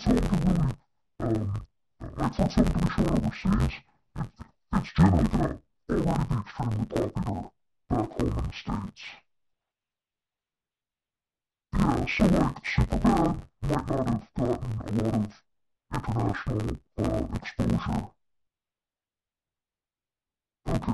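Throughout the speech, interleaved audio is being read as planar: each block of about 10.88 ms has its first half taken as left and second as right. Blocks this short leave the voice dull and robotic, buzzing at roughly 92 Hz without any clear octave drop.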